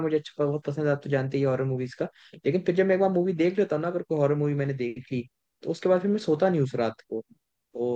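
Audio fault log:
No faults heard anywhere in this speech recording.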